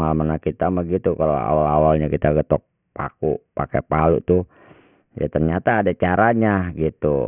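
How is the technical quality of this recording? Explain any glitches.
The recording has one fault, aliasing, running for the whole clip. Content above 3 kHz folds back into the band below it as gritty, metallic tones at wrong pitches, roughly 30 dB under the speech. This points to a drop to about a 6 kHz rate without an anti-alias filter. Unlike a plain low-pass, which just sounds dull, sibilants here turn harsh and the spectrum stays full right up to the 3 kHz edge.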